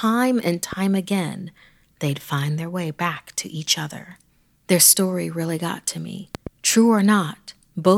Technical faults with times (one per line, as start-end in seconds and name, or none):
0.73-0.75 loud pop
6.35-6.49 loud pop